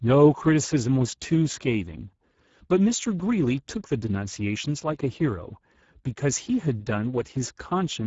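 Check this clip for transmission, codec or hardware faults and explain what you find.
One fault runs through the whole clip: Speex codec damage, and it is plainly audible.

From start to finish the speech sounds hoarse and noisy. The damage level fits a bitrate near 10 kbps. Speex is a CELP codec. It models the vocal tract and codes the excitation that drives it. At this low rate the excitation gets few bits, so it comes out coarse and grainy. Nothing is heard above 7.7 kHz, so the top of the sound is cut off.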